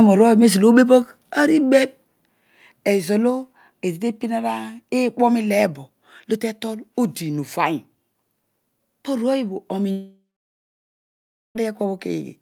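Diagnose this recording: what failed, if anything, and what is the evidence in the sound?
Microphone overload, likely at the converter. From 0.77 to 0.95 s the loudest speech peaks are flattened, about 2 dB over full scale, giving a harsh crackle.

Microphone volume stepped down, likely by call processing. Level drops abruptly at 1.02 s by 4 dB, just after the distorted peak, then at 2.04 s by 2 dB.

Long network dropout, likely. Sound stops arriving at 9.91 s. A fading buzz fills in, then about 1.3 s of silence follows. Audio resumes at 11.57 s with roughly 1.6 s missing.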